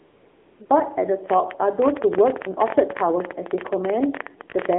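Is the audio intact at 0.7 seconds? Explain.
No. From 0.66 to 0.70 s there is a 40 ms stretch of AMR comfort noise. The phone treated this moment as a pause and sent no speech frames. The receiver filled the gap with synthetic noise built from a rough description of the background's level and spectrum. What you hear is a smooth, even hiss switching in where the sound should continue. That sets it apart from a plain dropout, which would fall to silence, and from concealment, which would smear or repeat the preceding sound.

Across the whole clip, this moment included, the AMR narrowband mobile codec is running at 7.4 kbps. The audio is confined to roughly 250 Hz to 3.6 kHz, and the low bitrate gives it a plainly audible buzzy, synthetic quality. This comes from the codec rebuilding the sound from a vocal-tract model driven by a few pulses per 5 ms subframe. That is what separates it from simple band-limiting, which would only sound muffled and not artificial.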